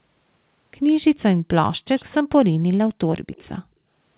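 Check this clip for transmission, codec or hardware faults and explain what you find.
One fault turns up, and it's an echo leak. At 1.97 to 2.14 s and 3.14 to 3.49 s, a faint copy of the speech trails about 155 ms behind, roughly 30 dB down. It's likely a loudspeaker echo canceller letting some of the far end slip back. The narrowband sound, with nothing above 4 kHz, fits a G.711 call path working as expected.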